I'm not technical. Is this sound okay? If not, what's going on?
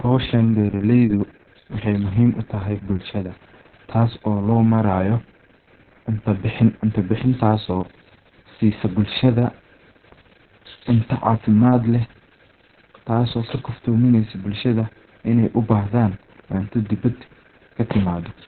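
No, the speech sounds muffled, hoarse and slightly robotic from start to finish, as if heard down an old phone line. This comes from Opus voice compression set very low. To save space, the codec throws away everything above about 4.3 kHz, which removes the crisp edges of consonants. It also keeps only a rough sketch of the voice's buzz, and that coarse detail causes the rasp and the mechanical tone.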